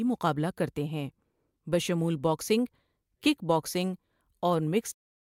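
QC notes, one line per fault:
No faults found.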